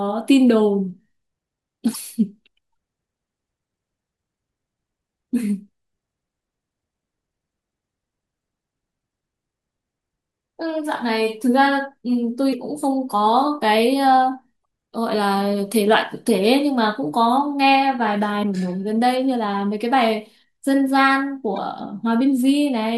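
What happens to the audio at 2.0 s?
Just before that point, from 1.91 to 1.96 s, there is damaged data in the compressed stream. For about 50 ms, part of the encoded speech is corrupt. The decoder cannot read those frames correctly. It loses its place in the stream and has to hunt for the next valid frame header before normal decoding resumes. The result is a brief chirp or squawk that cuts into the speech.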